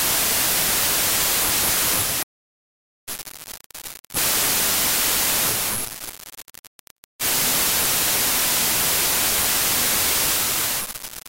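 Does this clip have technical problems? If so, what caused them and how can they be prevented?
Yes. Throughout the whole clip there is a wrong sample width fault: the speech data appear to have been stored with one sample size and decoded with another, which fits 32-bit integer samples being read back as packed 24-bit ones. Each decoded value straddles the byte boundaries of the original samples, so most carry mismatched bytes and only some keep the real signal's top bits. The result is loud noise with the speech buried inside it, playing at 0.75 times normal speed and correspondingly lower in pitch. To prevent it, make sure the reader takes its sample format from the file header or stream metadata, and check that it matches the format the writer used.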